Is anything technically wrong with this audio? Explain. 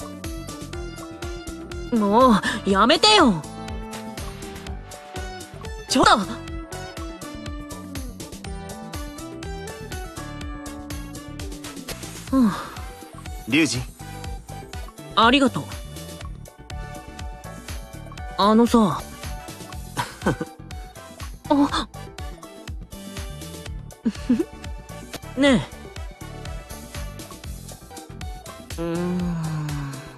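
Yes, there's damaged data in a compressed stream at 6.01–6.05 s, 11.89–11.92 s, 18.97–19.00 s and 25.13–25.17 s. Corrupt bytes throw the decoder off sync, so it garbles those frames and hunts for the next header, producing a short chirp, squawk, click or hole, each about 30 ms long.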